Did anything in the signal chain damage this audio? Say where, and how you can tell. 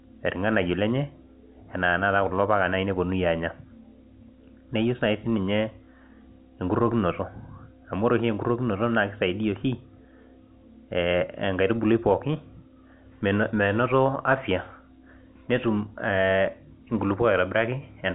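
No, nothing damaged this audio.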